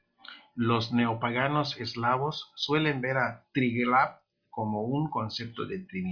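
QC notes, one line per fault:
No faults to note for this clip.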